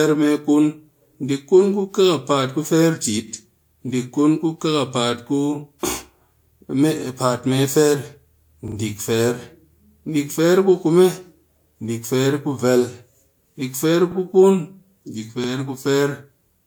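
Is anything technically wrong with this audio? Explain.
Yes, the speech has two stutters from a repeated buffer. At 8.68 s a short slice sounds three times in a row, ending at 8.76 s, and at 15.44 s a slice sounds twice, ending at 15.48 s, each repeat meeting the last with a hard join. Each repeated piece lasts about 40 ms, which fits a 40 ms playback buffer. Fresh audio did not reach the device in time, so it replayed the last buffer instead. Nothing appears to be skipped afterwards.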